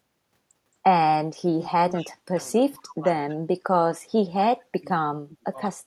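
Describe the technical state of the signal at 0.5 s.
At 0.5 s the speech signal is intact, with no audible fault at that moment.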